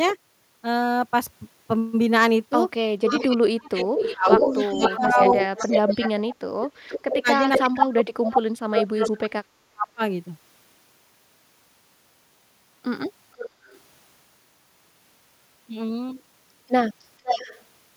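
Echo leak runs through this speech recording from 3.05 to 7.84 s and returns at 9.04–9.11, 13.36–13.78 and 17.24–17.62 s. A copy trailing by roughly 0.48 to 0.50 s sits about 5 to 15 dB under the talker, likely from a far-end loudspeaker echo that the canceller failed to remove. Speech suppressed in double talk affects 3.11–5.73 and 6.61–10.02 s. While both sides overlap, the talker is pulled down by as much as roughly 40 dB over about 1.5 seconds, then about three seconds, likely because the canceller mistook the talker for echo.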